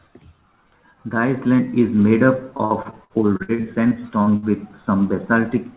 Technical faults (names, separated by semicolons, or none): repeated packet loss (robotic sound)